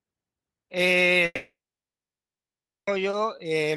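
From 1.25 s to 2.89 s the speech cuts out, most likely from a long network dropout: the last sound trails into a fading buzz, then about 1.4 s of silence before speech resumes mid-stream. Spectrogram and waveform show a smeared tail, then a blank gap, with content above 12 kHz absent throughout.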